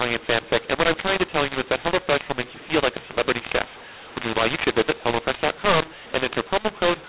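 Audio coded as G.711 A-law is decoded as mu-law throughout, a mu-law and A-law mix-up, so levels scramble: the speech turns harsh and distorted, and pauses fill with noise.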